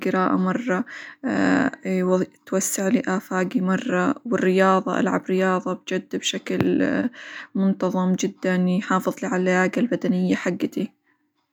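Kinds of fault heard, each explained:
No technical fault can be heard anywhere in this speech recording. Nothing in it calls for a separate entry.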